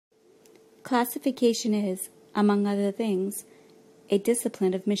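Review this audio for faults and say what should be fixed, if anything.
No faults; nothing needs fixing.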